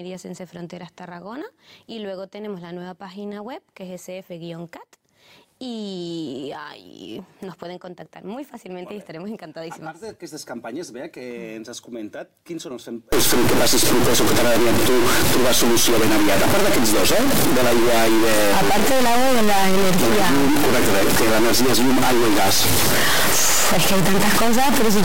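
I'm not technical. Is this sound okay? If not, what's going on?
No. From 13.12 s to the end, the sound turns harsh and buzzy, and quiet gaps fill with fairly loud noise. This is a stuck bit: one digit of every sample stays frozen, likely from a faulty cable or converter, corrupting about half the values.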